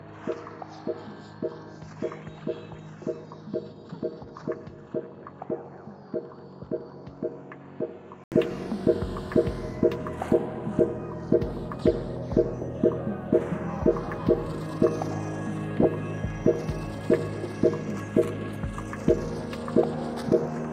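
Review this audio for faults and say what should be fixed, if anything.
From 0 to 8.32 s the sound is dull, nothing above 7.6 kHz, roughly 10 dB quieter, ending in an 80 ms gap: likely an input switched to a poorer device. Lock recording to one input device so the system cannot switch it mid-take.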